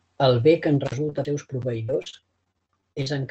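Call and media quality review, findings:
Intermittent contact, 0.86 to 0.94 s, just after "bé que en". Signal drops out for about 42 ms with crackle at both edges and faint hiss in the gap. Probable component: loose cable or plug. The circuit opens briefly, then recloses.

Repeated packet loss (robotic sound), 1.09 to 3.08 s, starting after "bé que en". Choppy speech. Thirteen holes, the longest 46 ms, with about 340 ms missing in total. Around 0.3 s is rebuilt by stretching the preceding sound, covering 14% of the span. Probable component: network path or jitter buffer. Packets arrive late or are lost, and the concealment cannot keep up.

CD skip, 1.25 s. A tick with a mute of about 3 ms, then playback resumes from a different point. Probable component: disc source, laser tracking. A knock or disc flaw made the pickup jump to another turn of the spiral. Overlaps the packet-loss stretch.

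The call path's upper band ends at 8 kHz, which fits an Opus link at around 32 kbps.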